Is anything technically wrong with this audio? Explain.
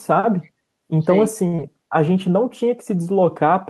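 Yes, there are three faults in this speech clip.

Echo leak, 0.43 to 0.50 s: a very faint, delayed copy of the speech, trailing the original by about 303 ms, can be heard for this short stretch. The likely cause is a far-end loudspeaker whose echo canceller let part of the microphone pickup through, so it was sent back down the line.

Short stall from a late packet, 1.47 to 1.55 s: a packet arrived after it was due and the jitter buffer emptied. The receiver held the last sound for 58 ms until the packet turned up, then resumed exactly where it left off. No speech is lost, but the moment is drawn out, with a slightly buzzy, sustained quality, and playback runs 58 ms later from this point on.

Short concealed packet loss, 1.55 to 1.60 s: directly after the stall, 40 ms of speech never reached the decoder in time. The receiver patched the gap with 29 ms of synthesized continuation, extending the preceding sound and blending back into the real audio. 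The result is a brief smear or wobble, and because more was lost than was filled, part of the speech is shortened.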